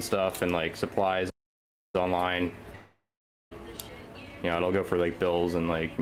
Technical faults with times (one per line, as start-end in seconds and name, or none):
1.30-1.95 playback stall
1.95-4.95 time-compressed catch-up
2.75-3.53 long network dropout